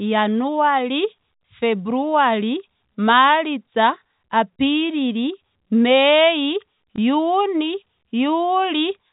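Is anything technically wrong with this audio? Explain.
Yes, one brief dropout. Packet loss with last packet repeated, 6.96 to 6.98 s: a single lost 20 ms packet was replaced by the previous one. The repeat seldom lines up with the pitch cycle, and a single repeat like this sounds like a small blip. The waveform shows a duplicated block.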